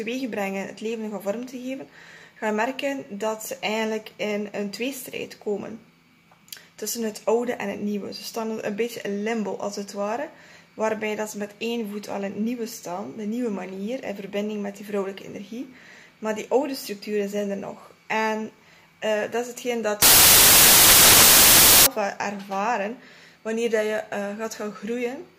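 Loud, harsh broadband noise covers the sound from 20.02 to 21.86 s: samples built from the wrong bytes, where misordered bytes turn the fast-changing low bits into each sample's dominant part.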